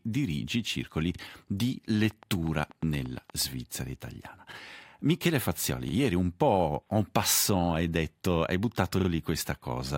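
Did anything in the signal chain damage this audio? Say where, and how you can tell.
Yes. Repeated buffer faults show up at the driver or buffer stage. At 1.15 s and again at 5.89 s, a 43 ms piece of sound plays twice with a hard join, heard as a short stutter. At 9.00 s the same thing happens, but that piece plays three times, so the stutter runs to 9.09 s. The repeat length fits a 2048-sample buffer. New audio arrived late, and the device replayed its last block instead of going silent.

A train of clicks runs from 2.11 s to 3.43 s. There are about ten clicks at a steady 8.4 per second, all much the same shape. They peak at roughly the level of the sound itself, and are heard as regular ticking. This points to the analogue wiring or the interface. The cause is likely interference from nearby equipment or a faulty connection or power supply injecting a pulse on a fixed cycle.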